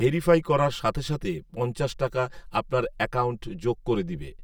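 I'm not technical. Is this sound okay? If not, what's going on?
No, it has channel delay (comb filtering) throughout: one side arrives about 5 ms late, so when combined, the speech sounds hollow and phasey, like through a tube.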